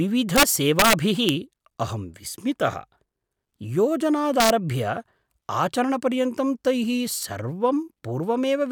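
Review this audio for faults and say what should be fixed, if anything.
Integer overflow produces harsh cracks in the speech at 0.36–0.43 s, 0.79–0.93 s, 1.29 s and 4.40–4.50 s. At those points the level runs past the integer limit, by about 4 dB in the first two and about 1 dB in the last two. Instead of stopping at the ceiling, each overshooting peak wraps to the opposite extreme. That full-range jump is what separates it from clipping, which flattens the peak and sounds buzzy rather than cracking. To prevent it, saturate or limit the gain and summing stages so values clamp at full scale instead of wrapping.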